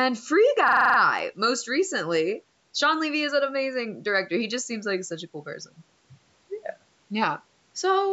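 From 0.68 to 0.98 s a hard, rapid stutter replaces the sound, one 43 ms fragment repeating exactly seven times at about 23 Hz, a machine-gun rattle. This is a system hang loop: the computer froze while the audio hardware kept replaying one ring buffer, which fits a 2048-sample buffer.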